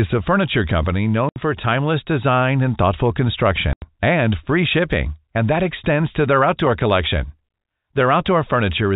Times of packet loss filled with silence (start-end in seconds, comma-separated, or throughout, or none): 1.29-1.36, 3.73-3.82